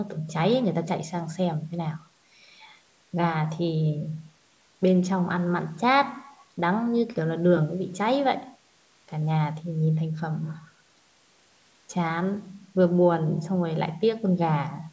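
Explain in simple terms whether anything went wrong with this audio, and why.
Nothing went wrong with this audio: it is ordinary speech that has passed through a call's microphone processing, which trims the deepest bass as it is designed to, and no fault can be heard anywhere in it.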